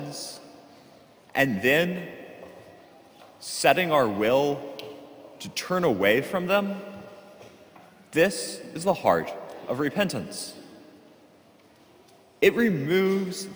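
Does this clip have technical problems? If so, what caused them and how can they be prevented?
Yes, crude rate conversion throughout: 32 kHz audio pushed to 48 kHz by repeating nearest samples, leaving a gritty inharmonic fizz roughly 25 dB down. Use a properly filtered resampler instead.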